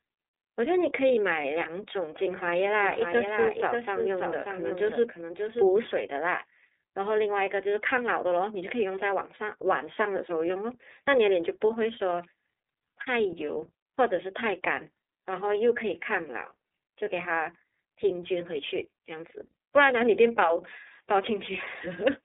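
From start to finish the speech sounds thin and boxed in, with a faintly rough, synthetic grain: there is nothing above 3.8 kHz, and the low end is trimmed too, leaving a narrow telephone band. This is the plainly audible mark of the iLBC codec, which codes each 30 ms frame's excitation independently of the one before. That frame length fits its 13.33 kbps mode, and the codec gives the voice its slightly coarse, processed texture.

From 2.83 s to 5.69 s a second copy of the speech runs about half a second behind the first, somewhat quieter. It sounds like a flat, dry repeat rather than an echo, with no decay or room colour, and it cuts in and out abruptly at those two points. This is a doubled audio track, likely caused by the same signal being captured a second time through a slower path and mixed back in out of step.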